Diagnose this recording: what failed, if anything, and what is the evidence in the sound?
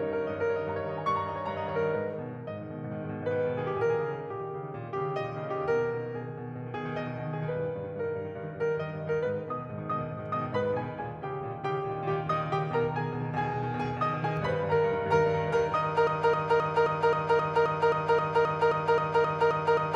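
A bit flip on the digital side, in storage or on a transfer link, corrupted three consecutive samples of the music at 14.37 s. Flipping one bit throws each sample value off by a power of two before it snaps back, so the waveform makes a brief jagged excursion. That is heard as a single sharp, broadband tick that has nothing to do with the surrounding music, the classic bit error spike.

From 16.07 s to the end, the stream stops advancing and a fragment of about 0.26 s repeats back to back, roughly 15 times, a broken-record loop. The segment recurs identically each pass, so the music turns into a mechanical stutter at about four repeats per second, and whatever should have played over those last seconds never arrives. This pattern is likely caused by a stalled player, encoder or stream that kept re-sending the last buffer it held.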